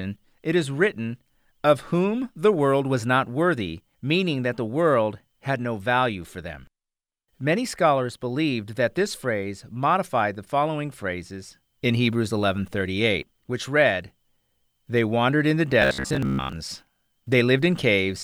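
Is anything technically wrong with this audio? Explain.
Yes, there's one fault. From 15.82 to 16.53 s there's robotic sound, likely from repeated short buffers: a 15 ms chunk looping gives a rigid, metallic 66.7 Hz buzz while most real audio gets skipped.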